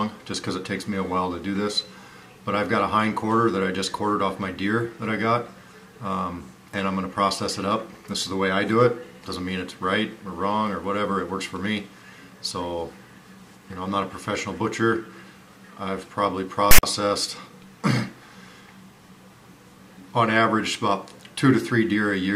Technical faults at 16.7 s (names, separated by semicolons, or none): file tags played as audio